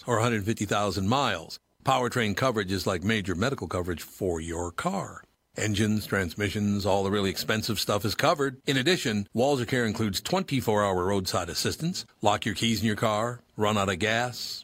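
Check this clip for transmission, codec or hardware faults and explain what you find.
Listening closely to the speech here, nothing stood out as a transmission, codec or hardware fault.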